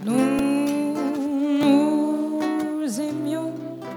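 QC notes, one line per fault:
0.39 s, repeated buffer: a 1.45 ms slice, which fits a 64-sample buffer, plays four extra times with a hard join at each repeat, so it comes out as a brief buzz rather than a stutter. Unlike a dropout, there is no gap or silence, and the sound carries on with essentially nothing lost.
1.63 s, repeated buffer: a 1.45 ms slice plays once more, heard as a single click rather than a buzz.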